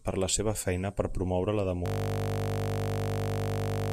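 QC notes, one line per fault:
1.86 s to end (3.92 s), system hang loop: a single 20 ms slice of the speech repeats over a hundred times, so the sound turns into a steady buzz at 50 Hz that lasts to the end of the clip. The host or driver stopped supplying new audio while the playback hardware kept reading the same ring buffer. Its short length fits a 20 ms buffer, which is why the loop merges into a tone instead of a stutter.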